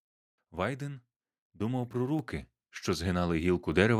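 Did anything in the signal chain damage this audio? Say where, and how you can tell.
Yes. The damage comes from call processing, as a microphone volume stepped up fault occurring twice. At 2.19 s the level of the sound and its background noise jumps together by about 5 dB, and at 3.72 s it jumps again by about 4 dB. The software judged the input too quiet and raised the device's input volume in a single step, so the gain changes abruptly.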